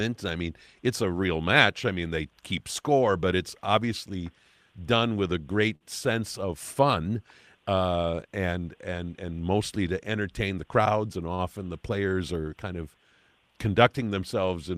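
At 5.75 to 5.83 s the speech hangs briefly: a short stall from a late packet. The packet arrived after its playout time and the jitter buffer emptied, so the receiver stretched the last sound for 53 ms and then resumed exactly where it stopped. One sound is held a touch too long, with a faint buzz or dip. Unlike a packet-loss gap, nothing is skipped, but the delay grows by 53 ms.

From 10.50 to 10.76 s there is a jitter buffer speed-up. The buffer had built up more audio than its target, so the receiver trimmed many short pitch-period-length pieces, around 40 ms in all. The speech plays at 113 % speed and sounds hurried. Unlike a sample-rate or pitch error, the pitch stays the same and only the pace changes.

At 11.34 to 11.41 s a second short stall from a late packet holds a sound for 44 ms, and the delay rises by 44 ms, with no audio lost.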